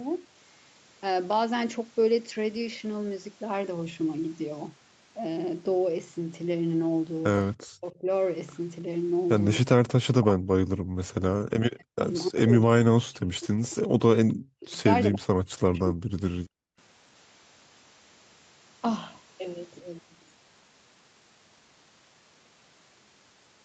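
Between 7.78 and 16.48 s the speech repeatedly dips and breaks up. The dips fall at 7.78–8.08, 10.02–10.69, 11.5–12.07, 12.28–13.93, 14.43–14.76, 15.04–15.27 and 15.67–16.48 s, and the longest stretch lasts about a second and a half. The pattern points to speech suppressed in double talk, likely caused by an echo canceller that could not separate the near talker from loudspeaker echo and attenuated both. Most drops go down by about 40 dB, and the two shallower ones, the first and the sixth, by about 25 and 30 dB.

From 10.97 to 11.01 s the background briefly vanishes by about 40 dB and then returns. This is background gated by the echo canceller. While the far side played through the loudspeaker, the canceller clamped the microphone hard for roughly 40 ms and then released it. All of this sits in a band that stops at 8 kHz, which fits a wideband Opus call path at around 64 kbps.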